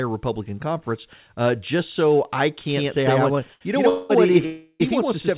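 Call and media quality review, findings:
Doubled audio track from 2.69 s, right after "uh just so I", through to the end: a second full-band copy, about as loud as the first, trailing by roughly a tenth of a second. Likely a second capture path or misaligned edit. Abrupt onset, no decay.

Short stall from a late packet, 3.54 to 3.63 s: the jitter buffer ran dry, and the receiver stretched the last sound for 71 ms until the packet came. Playout resumes where it left off and nothing is lost, but the sound is held audibly long.

Call audio freeze at 3.89 to 4.11 s, 207 ms filled with a fading continuation of the last sound, and at 4.45 to 4.82 s, 344 ms, decaying to about 10 ms of silence. Likely packets held up in transit and an emptied jitter buffer. Playback resumes where it stopped, so gaps are inserted rather than audio dropped, all over the narrowband, 4 kHz-limited call codec.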